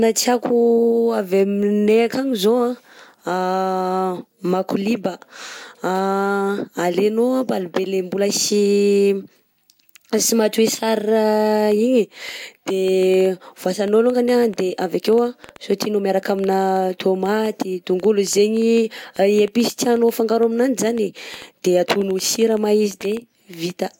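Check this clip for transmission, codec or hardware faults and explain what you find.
There is one fault, a train of clicks, running from 11.72 s to 23.71 s. The clicks arrive about 5 times per second at an uneven pace, some seventy in all. Each has much the same sharp shape. Their peaks reach roughly the level of the speech itself. The likely cause is interference from nearby equipment or a faulty connection or power supply injecting repeated pulses into the signal. They are heard as ticking over the speech and in its pauses.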